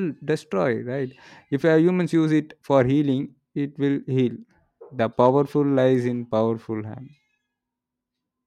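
There are no technical faults to describe in time order in this speech recording.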